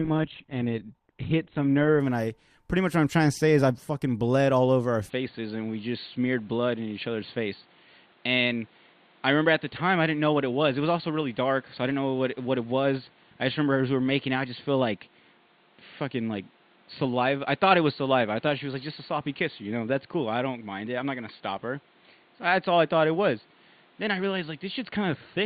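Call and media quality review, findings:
Adaptive stream starting at a low bitrate, 0.0–2.0 s, ending just before "and I pretty much". Player/ABR component. Treble thin and synthetic, codec artefacts stronger, consistent with a low-rate Opus start near 12 kbit/s. Quality steps up abruptly, with no gap, to what sounds like about 64 kbit/s once throughput was measured.

Input switched to a poorer device, from 5.09 s to the end, right after "bled all over our". Capture path, likely a microphone or headset-profile switch. Instant change, no silence at the switch: band now stops at 4.5 kHz, tone duller, level down about 5 dB, new noise floor about 35 dB below the signal.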